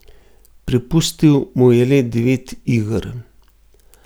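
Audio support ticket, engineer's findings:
No faults found on the speech recording; nothing for the engineer to trace.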